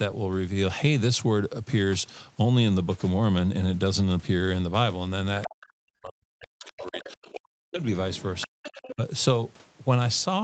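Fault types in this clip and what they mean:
Other side's voice leaking through: from 5.42 s, scraps of a second voice, roughly 10 to 35 dB below the talker, likely loudspeaker echo the canceller missed.
Speech suppressed in double talk: at 5.47 to 7.81 s and 8.44 to 9.02 s the talker dips sharply, likely from the canceller ducking overlapping talk.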